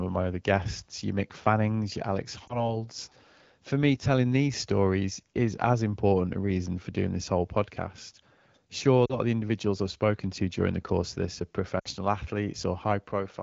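Lost AMR speech frames: radio errors corrupted frames, so the AMR-WB decoder concealed them by replaying the last good pitch and vocal tract settings at falling gain. This gives a brief warble at 2.48–2.77 s (20 ms) and a dip at 9.05–9.17 s (40 ms), just before "of the individuals I've". At 11.80–11.88 s (60 ms), after "course of this are", the sound drops to near silence.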